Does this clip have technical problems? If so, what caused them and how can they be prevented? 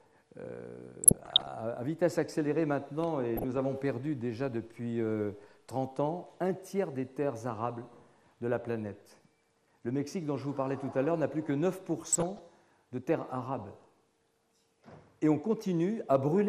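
Yes. MP2 compression runs throughout: the sound is dull and gurgling, with granular distortion, likely from MPEG Layer II coding at a rate that fits roughly 80 kbps. Too few bits shut off upper sub-bands and quantise the remaining ones coarsely. Encoding at 128 kbps or more would avoid this.

DAB burbling appears from 1.04 to 1.48 s, 3.37 to 3.57 s and 11.98 to 12.39 s as short blips of noise in single sub-bands. Weak reception let bit errors, at a rate of a fraction of a percent, slip past error correction, corrupting sub-band samples and scale factors so single bands jump in level. A better antenna or stronger signal prevents it.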